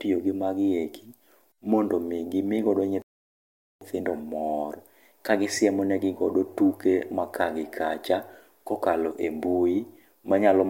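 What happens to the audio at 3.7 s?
At 3.7 s the speech is still frozen in a rebuffering stall, silent from 3.02 to 3.81 s: the player ran out of downloaded audio and waited. Unlike a dropout, nothing is skipped; it resumes exactly where it stopped, adding about 0.79 s.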